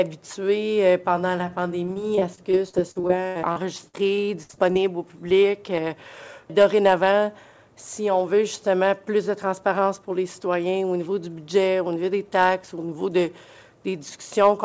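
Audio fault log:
1.86–4.77 s: repeated packet loss (robotic sound). Roughly twenty short dropouts arrive in quick succession, the longest about 78 ms, together removing a little over half a second of audio. Each hole is bridged by extending the preceding sound, so about a fifth of this stretch is synthetic fill. The rapid alternation of real and stretched sound gives a choppy, robotic texture. Content above 8 kHz is absent, consistent with a wideband call codec such as G.722.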